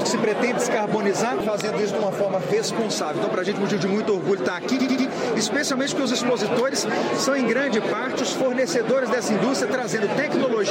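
Repeated frames: a run of compressed frames was sent again, so the decoder replays it. At 2.44 s a 46 ms block plays twice. From 4.79 to 5.06 s a 93 ms block repeats three extra times, a stutter, adding about 0.3 s.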